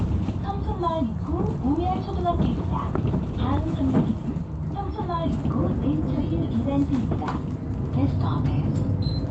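No technical faults are audible.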